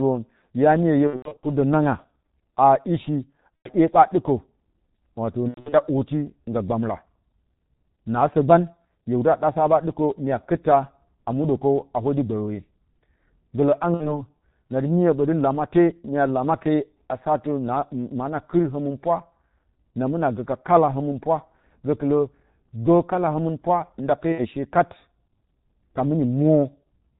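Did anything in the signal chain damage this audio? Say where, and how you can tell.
Yes. The G.723.1 codec damaged the audio throughout, at the codec stage. The speech is coded at 6.3 kbit/s and the damage is heavy. Nothing above 4 kHz survives, so the sound is muffled. The coarse voice model, updated only once per 30 ms frame, makes the voicing hoarse and smears the consonants. That fits a low-rate telephony codec rather than a filter or analogue fault.

VoIP packet loss concealed by the speech codec also appears, from the network stage, at 1.07–1.46 s, 3.57–3.69 s, 5.48–5.75 s, 13.94–14.24 s, 18.99–19.03 s and 24.32–24.48 s. The first burst has about 240 ms of gaps scattered over 360 ms, with the longest run 90 ms. Each gap turns into a buzzy or noisy smear that fades, because the decoder reuses its last pitch and filter at falling gain. The weakness continues briefly after packets return.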